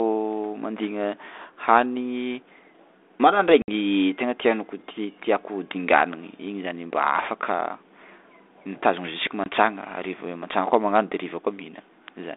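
At 3.62 to 3.69 s and 9.44 to 9.47 s, packet loss on the ADPCM call leaves hard-edged silent gaps, flat blocks in the waveform, then slightly distorted speech as the decoder resynchronises.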